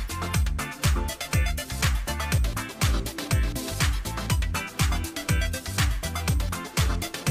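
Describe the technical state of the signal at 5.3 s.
At 5.3 s the signal is intact, with no technical fault present at that moment.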